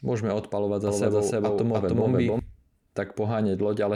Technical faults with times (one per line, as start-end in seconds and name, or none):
0.87-2.39 doubled audio track